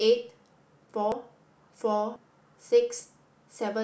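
At 1.12 s, 2.16 s and 3.0 s the speech jumps forward, losing roughly 40 ms, 70 ms and 40 ms; likely a dropped buffer (overrun). The waveform shows an abrupt discontinuity without any gap, and the spectrogram shows a thin vertical broadband line at each join.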